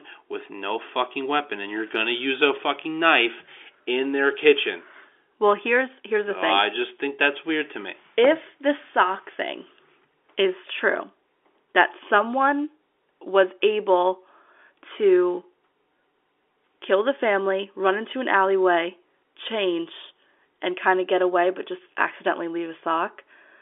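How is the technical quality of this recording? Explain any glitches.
No glitches to report here: the speech comes through over an ordinary telephone line, with the sound confined to roughly 300 Hz to 3.5 kHz, which fits 64 kbps mu-law phone coding, and nothing out of the ordinary turns up along the way.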